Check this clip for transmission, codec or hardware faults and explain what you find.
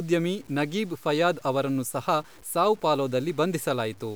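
One fault runs throughout: low bit depth without dither. The speech sounds grainy, fitting about 7 bits, likely truncated undithered. The error tracks the signal, so quiet passages turn gritty.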